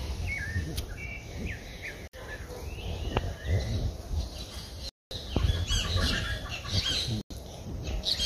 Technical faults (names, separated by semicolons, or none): Bluetooth stall